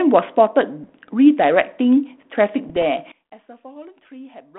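Bits flipped on the ADPCM link corrupt the decoder's step size and predictor along with the sample values, so each error keeps ringing for a few milliseconds. These bit errors on an ADPCM link sound like pops and a rough, gritty burst with brief level jumps, from 0.83 to 0.90 s and from 2.66 to 2.83 s. The error rate is low, well under one percent. Around them, the narrow 200 Hz to 3.5 kHz telephone band and light codec hiss fit a 32 kbit/s G.726 path.

From 3.12 s to the end, the level falls by about 22 dB and the speech turns faint. The likely cause is one channel inverted in polarity. When the two channels are summed to mono, everything common to both cancels, and only the small difference between them remains.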